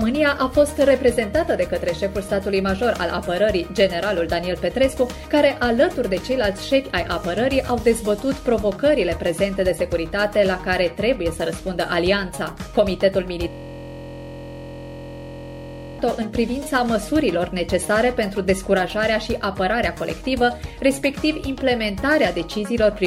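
From 13.50 to 15.99 s, a system hang loop: a frozen computer or driver replays one 23.22 ms buffer (fitting 1024 samples) as a 43.1 Hz buzz, with identical repeating waveform cycles and evenly spaced harmonic stripes.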